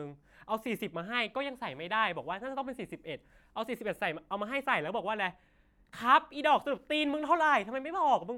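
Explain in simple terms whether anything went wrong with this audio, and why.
Nothing went wrong here; no faults can be heard.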